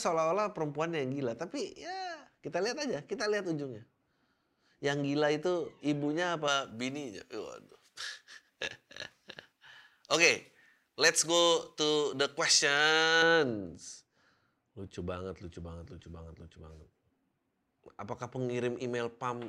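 Right after "itu ibunya", from 6.48 to 13.22 s, pre-emphasis is left on: the treble lift applied for transmission never got its matching de-emphasis, which fits a J.17 curve. Around 10 kHz sits about 11 dB hot against 1 kHz, so the speech turns thin, bright and hissy on sibilants.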